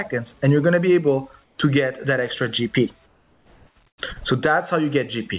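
Audio over a call path with nothing above 4 kHz, where the background turns flat and featureless at 1.44–1.58 s (about 6 dB quieter), 3.06–3.76 s and 3.88–3.98 s (about 4 dB quieter): comfort noise in place of the background, likely from discontinuous transmission.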